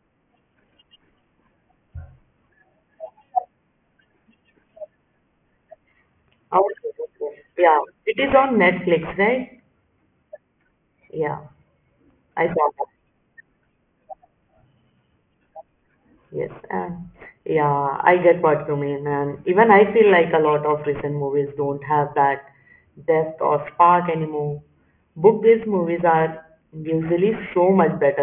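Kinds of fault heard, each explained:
Aliasing: The speech has been squeezed down to a much lower sample rate with nothing filtering off the top end first, so everything above about 3 kHz folds back down as false, unrelated tones. It sounds like a drop to a 6 kHz rate. It runs through the whole clip. The esses and other hiss sounds come out gritty and metallic, with the folded junk sitting roughly 20 dB under the speech and the band packed right up to its edge.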